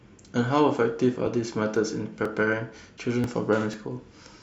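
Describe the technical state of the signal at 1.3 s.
At 1.27 s the speech has a tiny skip: a few milliseconds of sound are gone, and the audio on either side is butted straight together with no silence. This is audio missing between chunks, likely from a recorder or processor handling the signal in half-second blocks and losing a sliver at one block boundary. Unlike a dropout, which leaves an audible gap of silence, this splice leaves no silence at all, only a small jump in the sound.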